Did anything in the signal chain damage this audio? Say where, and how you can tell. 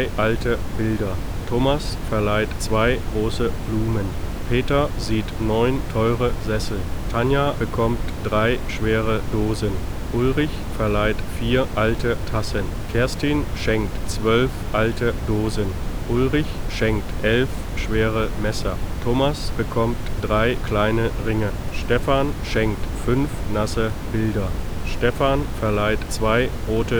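No, nothing in the signal chain damaged this audio.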